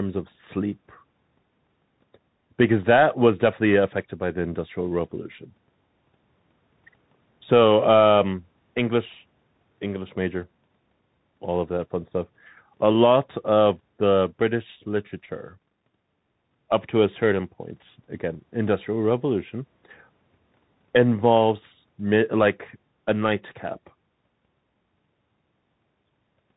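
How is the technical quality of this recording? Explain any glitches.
The quality is poor. The speech has passed through a narrowband Bluetooth link, and the damage is plainly audible for the whole clip.

Bluetooth CVSD headset codec, throughout. This headset codec sends one bit per sample, saying only whether the wave goes up or down. The step size adapts as it goes. The result fits a 64 kbps link. Nothing above 4 kHz survives, so the speech sounds muffled and boxed in. Loud high sounds outrun the step and distort. S sounds turn scratchy. A granular hiss sits under the speech.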